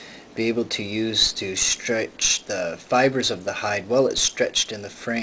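There are no technical faults to describe in time order; the sound comes through the G.722 WebRTC call path with nothing above 8 kHz.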